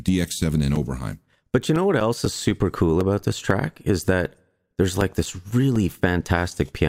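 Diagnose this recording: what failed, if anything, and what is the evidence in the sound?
The failure is at the driver or USB transfer stage: periodic USB or driver dropouts. Through the speech, regular ticks recur every 0.25 s from 0.26 s to 6.76 s. Each is a gap of a few milliseconds filled with silence, where something blocked the audio stream on a fixed schedule.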